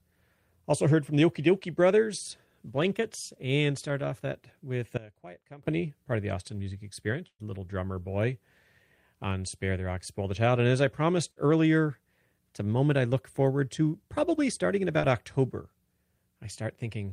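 At 4.97 s the speech and its background noise drop together by about 20 dB in a single step and stay low until 5.63 s, when they step back up. This sudden gain jump was likely a level setting or bit shift applied without any ramp. On the waveform the envelope changes height instantly at both edges, and the spectrogram shows every band dimming at once for that stretch, with no fade on either side.

From 7.27 to 7.42 s there is a burst of packet loss. About 120 ms of audio never arrived. The receiver extended the last sound for roughly 114 ms, letting it decay into a held buzz or hiss, and about 60 ms of that is silent. On a spectrogram this shows as a smeared continuation fading into a blank gap before speech resumes further along.

A second burst follows at 11.31 to 11.46 s, with about 40 ms lost and around 54 ms of synthetic fill. A further 7 ms of real audio was cut away at the join, so the speech jumps forward slightly. 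On the waveform the filled stretch is too uniform before it splices abruptly back into the real signal.

At 14.99 to 15.06 s there is a short concealed packet loss. About 40 ms went missing and was covered by roughly 38 ms of continued pitch or shaped noise, then blended back. It is heard as a brief smear or wobble. The spectrogram shows a narrow patch where the harmonics blur and flatten, and the waveform shows a small, overly uniform segment.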